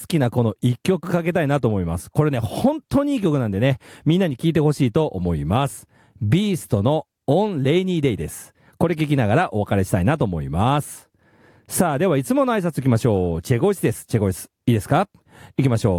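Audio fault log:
No faults detected across the speech recording.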